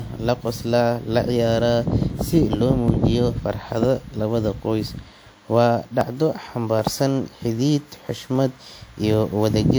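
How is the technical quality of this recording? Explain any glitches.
The recording has two faults: a codec-damaged tone across the whole clip and a regular train of clicks.

Generation loss runs through all of the speech. It sounds swirly, hollow and smeared, and consonant attacks are blurred. The most likely cause is the audio being passed through a lossy encoder several times. The character points to an older WMA-style codec at around 96 kbit/s. Each re-encode quantises on a shifted frame grid, so the noise and gaps build up. On a spectrogram this shows as patchy, flickering holes in the upper bands and smeared transients. Nothing appears above about 20.1 kHz.

Clock drift buffer slips appear as short clicks that repeat every 0.78 s, from 0.54 s to 9.14 s, about ten in all. Two devices running on clocks that differ by roughly 500 ppm are the likely cause. The buffer between them fills or drains until a block of around fifteen samples is dropped or repeated. 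In the waveform each slip is a discontinuity or step. On a spectrogram it is a thin vertical broadband line, evenly spaced, wherever speech is present.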